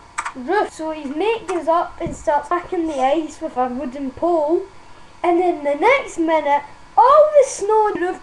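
Damaged data in a compressed stream at 0.69, 2.51 and 7.95 s: corrupted frames make the decoder lose sync briefly, producing short chirps or blips in the audio.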